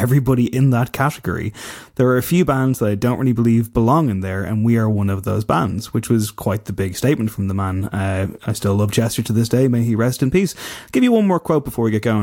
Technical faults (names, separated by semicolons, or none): none